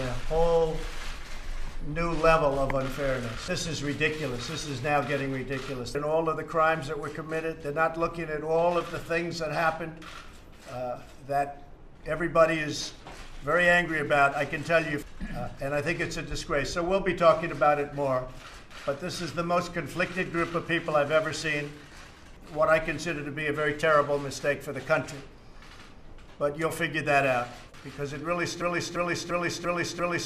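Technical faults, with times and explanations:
28.62 to 30.25 s, broken-record loop: a 345 ms fragment repeats exactly five times to the end, likely a stalled player or stream resending its last buffer.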